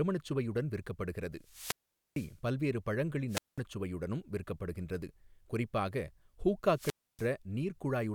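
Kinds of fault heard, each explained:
Wireless microphone squelch dropout: the FM radio link fades and the receiver's squelch mutes the speech, leaving gaps of 0.44, 0.20 and 0.29 s. A waveform shows flat, near-empty stretches. A spectrogram shows brief broadband hiss, then blank columns.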